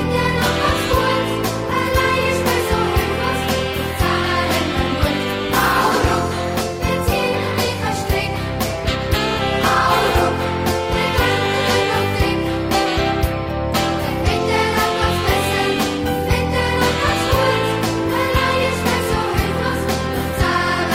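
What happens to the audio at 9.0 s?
Nothing goes wrong at 9.0 s; the audio there carries on intact, with no dropout, click or distortion.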